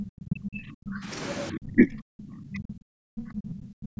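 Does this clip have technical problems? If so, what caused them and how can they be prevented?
Yes. The speech drops sharply at 0.26–0.59, 0.85–0.98, 1.51–1.89, 2.10–2.16, 2.51–2.71, 2.96–3.11 and 3.38–3.56 s, by roughly 25 to 40 dB. This is speech suppressed in double talk. Both sides were likely talking at once, and the echo canceller, unable to separate the near talker from the loudspeaker echo, turned everything down. On a spectrogram these show as abrupt dark gaps cutting across the voice band, and the waveform pinches almost flat. Better double-talk detection in the canceller, or a headset in place of an open loudspeaker, prevents it.

From 3.84 to 3.98 s the background is gated by the echo canceller. While the loudspeaker plays, it clamps the microphone down by about 40 dB, so the room sound briefly vanishes and then returns. The waveform shows the noise floor collapsing to near-silence, and the spectrogram shows a short, empty vertical strip. 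Gentler suppression with comfort noise filling the gap prevents it.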